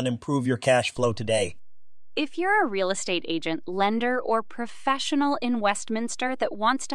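A DC step at 0.97 s shifts the waveform's zero line by about -36 dBFS and holds to the end, giving a single low thump while the speech continues.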